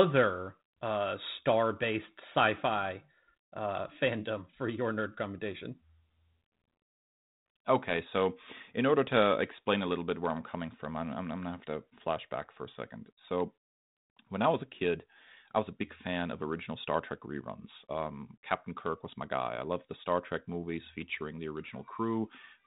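No technical faults are audible in this speech recording.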